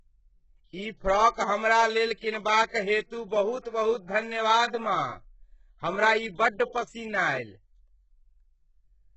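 Throughout the speech, the treble up to 8 kHz sounds bright but synthetic: sibilants come out gritty, metallic or lispy. That points to HE-AAC compression as the likely cause, its band replication copying lower bands upward, with heavy damage fitting a bitrate around 8 kbps. A plain low-pass would sound dull instead.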